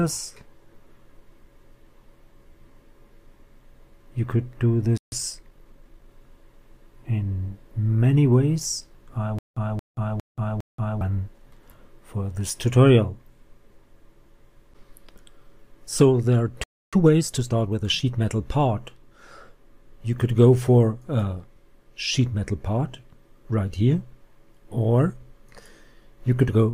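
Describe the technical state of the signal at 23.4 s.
At 23.4 s the signal is intact, with no dropout, distortion or other audible fault at that moment.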